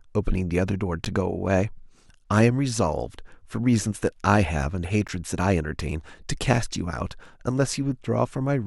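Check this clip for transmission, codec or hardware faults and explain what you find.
Two short dropouts break the speech, both of the same kind.

Gap between stream segments at 1.05 s and 5.08 s: mismatched timestamps leave a hole of about 11 to 12 ms that the player fills with silence. This produces a hard-edged click-like break, spaced about 4 s apart, which fits 4-second segments. No audio is lost.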